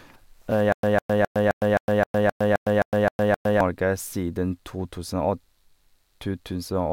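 Speech, with a stutter with silent gaps running from about 0.72 s to 3.61 s. The same 151 ms burst plays eleven times, each followed by 110 ms of dead digital silence, so it ticks along at a steady 262 ms cycle. It sounds like the player or stream likely stalled and kept replaying its last buffered fragment on each retry before running dry, so whatever audio belonged in that stretch never arrives.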